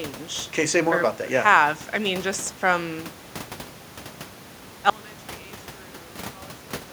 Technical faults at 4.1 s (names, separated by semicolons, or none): none